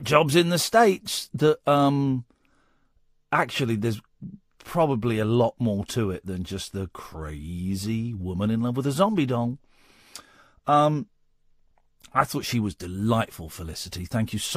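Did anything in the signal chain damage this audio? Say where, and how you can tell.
No, nothing in the signal chain audibly damaged this speech recording; every stage from capture to playback passes the signal along intact.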